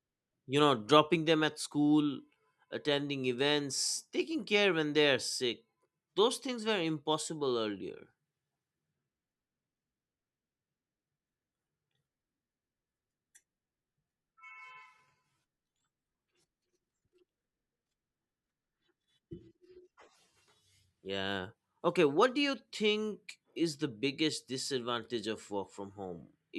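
A speech recording with nothing technically wrong to report.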